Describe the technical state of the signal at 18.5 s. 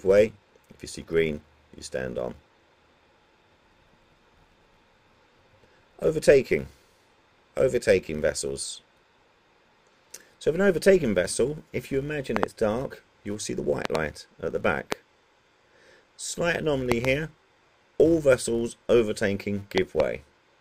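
At 18.5 s the filter restarted on every block, as it does throughout the clip: each block starts from zeroed state, producing a 200 Hz buzz that tracks signal level.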